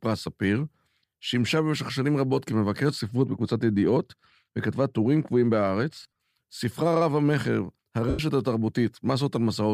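From 3.01 s to 6.21 s, the speech turns dull and muffled. This is de-emphasis applied wrongly. A treble cut meant to reverse pre-emphasis was applied to audio that never had it. The response slopes down smoothly toward the top. By 10 kHz it sits about 8 dB below 1 kHz. Sibilants and consonant edges lose their crispness. The lower range keeps its level, so the change sounds like a blanket over the top end.

Near the end of that dull stretch, from 6.00 s to 6.06 s, come lost LE Audio frames. About 90 ms of audio is missing, spread over roughly 150 ms in short gaps of about 20 ms at most. The decoder, likely LC3 at 7.5 ms per frame, fills each gap by reusing the last spectrum with random signs. The speech briefly smears into a noisy, rough blur. A second loss, from 8.09 s to 8.19 s, runs about 97.5 ms, which fits roughly thirteen frames. Here the smear fades toward silence before the speech returns.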